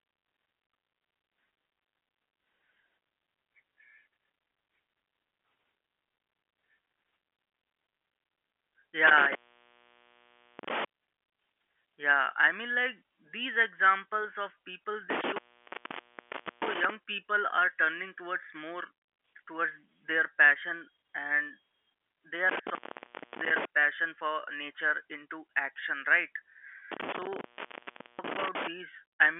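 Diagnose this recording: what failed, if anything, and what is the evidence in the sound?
Intermittent contact in the analogue wiring: the speech drops out with crackle at 15.10–16.90 s (about 1.24 s open, after "these examples of people"), 22.49–23.65 s (0.64 s, before "passion for nature into") and 26.92–28.67 s (0.75 s), as a loose plug briefly opens.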